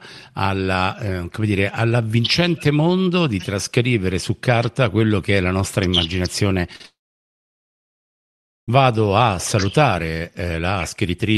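At 6.73 s, then from 6.76 to 6.81 s and from 6.83 to 6.85 s, three bursts of short concealed packet loss occur in quick succession. Roughly 10, 40 and 10 ms of audio arrived too late, and the receiver filled each gap by extending the preceding sound before crossfading back. The result is a rapid smear or wobble.

From 6.86 to 8.69 s a long network dropout, likely from a stall in the connection, removes about 1.8 s of audio. The concealment first carries the last sound on as a fading buzz or hiss, then gives way to near silence for most of that span before the signal resumes with that section missing. The waveform flattens to a thin line, and the spectrogram goes dark across all frequencies. Throughout the clip, the Opus call path cuts content off above 12 kHz.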